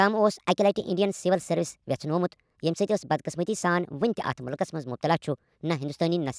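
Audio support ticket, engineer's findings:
Wrong sample rate, whole clip. Playback clocking mismatch: no resampling stage, so samples run about 1.38 times too fast, which fits 16 kHz audio played out at 22 kHz. Speech hurried and raised in pitch by about 5.5 semitones, speed and pitch shifted together.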